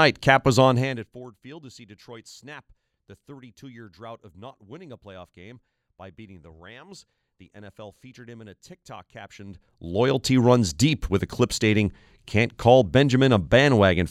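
A speech clip with zipper noise at two level moves: a drop of roughly 25 dB from 0.64 to 1.27 s and a matching rise from 9.22 to 10.23 s. The gain changes in unsmoothed steps, around 150 a second, so a fine ticking rides on it. The waveform envelope shows a staircase, and the spectrogram shows faint broadband vertical lines at regular spacing.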